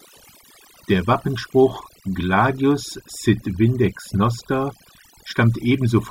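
Right from the start and all the way through, this speech has overdone noise removal: the reduction was pushed too hard, so frequency bands near the noise floor get pulled down or shut off, taking quiet parts of the voice with them. You hear a near-silent background with twinkly specks.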